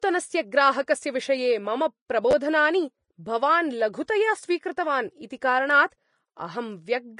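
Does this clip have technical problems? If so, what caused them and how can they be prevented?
Yes. Vorbis compression runs through the whole speech clip. Nothing is present above 10.6 kHz, and the codec damage is plainly audible: the treble turns into a hissy, grainy wash, tones sound roughened and attacks are blurred. The likely cause is a low-bitrate Vorbis encode, consistent with roughly 31 kbps, where the encoder lowers the cut-off and quantises the high-frequency residue so coarsely that fine detail becomes noise of similar energy. Encoding at a higher bitrate or quality setting would prevent this.

A repeated buffer occurs from 2.31 to 2.33 s. One short piece of audio plays three times in a row, with a hard join at each repeat. Because the piece is so brief, consistent with a 10 ms buffer, it comes across as a click or brief buzz rather than an obvious stutter. This happens when fresh audio fails to reach the output device in time and the previous buffer is replayed, and around 20 ms of the real signal is lost. 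Larger buffers or a less heavily loaded playback and capture path would prevent it.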